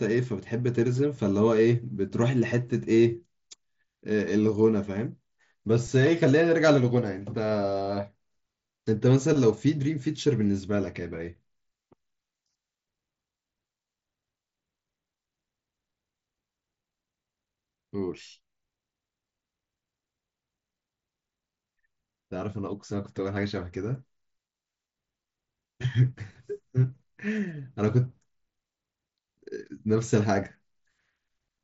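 Nothing has gone wrong in this speech clip; it's simply coming over a Bluetooth headset link using the mSBC codec, so the sound tops out around 7.7 kHz with the faint grain that codec leaves on louder moments.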